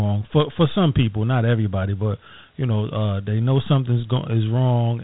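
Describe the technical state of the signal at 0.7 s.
At 0.7 s the speech is dull and gritty, with hiss trailing it and nothing above 3.8 kHz: Dialogic VOX ADPCM coarse 4-bit coding, present throughout, consistent with a 32 kbps stream.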